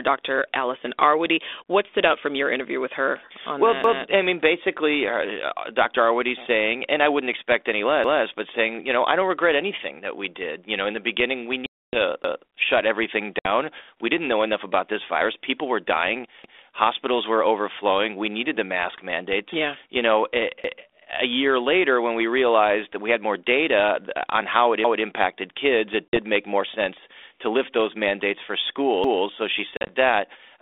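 At 3.84 s, just after "interview with her well" and before "I mean basically uh", a 200 ms stretch plays twice: overlapping chunks, where each 4-second block begins before the previous one ends. The same stutter recurs at 8.04, 12.24 (before "shut everything"), 16.44 (after "were dying"), 20.64, 24.84 and 29.04 s. On a waveform, each shows as a duplicated segment with a vertical seam at the join.

Packet loss on an ADPCM call cuts a 270 ms hole at 11.66 to 11.96 s, with shorter gaps at 13.39 to 13.47 s and 26.09 to 26.18 s, and scattered dropouts at 29.77 to 29.92 s. Silence replaces the lost audio, and the decoder's predictor and step size drift out of step. The sound returns with brief distortion. A spectrogram shows hard-edged blank columns followed by slightly distorted speech, all inside the 32 kbit/s G.726 band that stops near 3.6 kHz.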